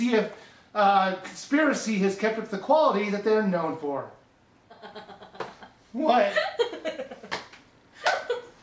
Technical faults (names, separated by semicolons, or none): none